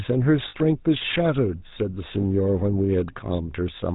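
A speech clip passed through the GSM full-rate codec from start to finish. The damage is plainly audible. The voice has a buzzy, gravelly roughness. Nothing comes through above 4 kHz, so the sound is dull and boxy. The codec rebuilds the voice from a vocal-tract model driven by a sparse, regular pulse train, and that thin excitation gives the grainy texture. The character fits the 13 kbps full-rate coder. There are also lost GSM frames at two points. From 0.48 to 0.55 s, about 60 ms, the sound freezes into a short metallic ring. That fits three missing 20 ms frames. The decoder kept replaying the last good frame, which gives the held, tinny quality. A shorter dropout at 2.22 to 2.25 s, about one frame, gives a brief rough blip by the same mechanism.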